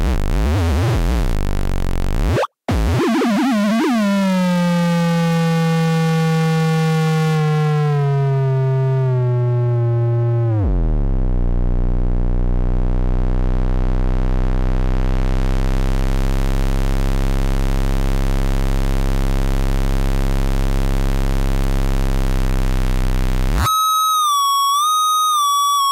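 Everyday sound with two isolated sharp ticks at 5.33 s and 21.64 s, the second louder than the first. Each is a bit error spike: one corrupted sample jumps by a power of two and snaps back.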